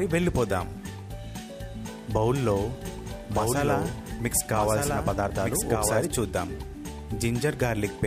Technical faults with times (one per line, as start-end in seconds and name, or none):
2.43-6.05 doubled audio track